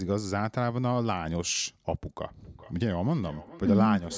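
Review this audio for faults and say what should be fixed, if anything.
From 2.38 s to the end at 4.18 s there is feedback echo between two devices. A second device in the same room plays the call back into the first device's microphone, whose echo canceller cannot remove sound it did not play. Each phrase returns around 0.4 s later, about 19 dB below the speech, thinner and ringing. Unlike room reverberation, it arrives as a distinct delayed copy rather than a smooth decaying tail. To prevent it, mute one device's microphone or speaker, or use headphones on one of them.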